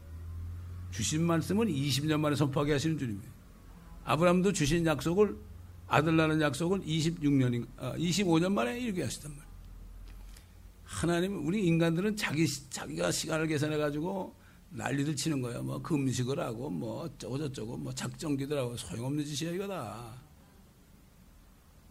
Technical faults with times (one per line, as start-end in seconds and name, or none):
none